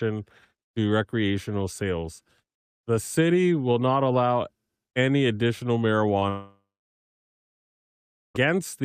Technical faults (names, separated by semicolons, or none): short concealed packet loss; long network dropout